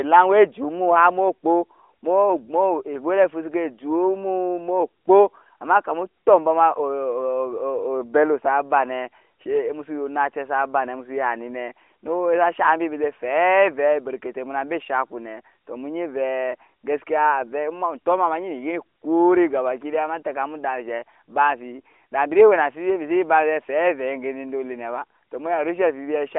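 Nothing is technically wrong with the speech in this clip, which comes through a narrowband mobile line that carries nothing above about 3.6 kHz.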